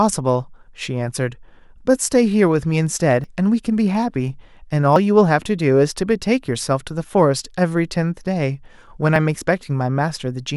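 At 3.24, 4.96 and 9.16 s the speech jumps forward, with no gap of silence at the join. Each time a short chunk, roughly 40 ms, is simply missing and the sound on either side butts straight together. That's most likely a dropped buffer (overrun), where the recording software didn't grab its samples before the hardware wrote over them, so a buffer's worth of audio vanished.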